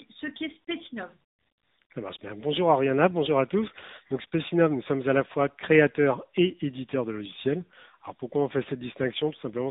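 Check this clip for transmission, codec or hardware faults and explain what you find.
One fault runs through the whole clip: tandem speech coding. The speech sounds rough, muffled and warbly, with nothing above about 3.8 kHz. It points to two speech codecs in series, CVSD and then AMR-NB at 7.95 kbit/s, with a G.711 mu-law link between them. Each coder re-encodes the previous one's degraded output, so the losses stack.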